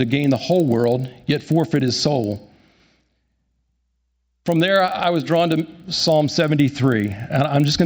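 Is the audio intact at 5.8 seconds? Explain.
No. At 5.8 seconds, as throughout the clip, the speech carries a resampler restarted on every block. The conversion from 16 kHz to 48 kHz was done on 40 ms blocks in isolation, so at each edge the converter lacked the true neighbouring samples and left a small error. Those errors recur 25 times a second, giving a rough buzz of regular ticks that rides on the speech and drops away when the signal stops.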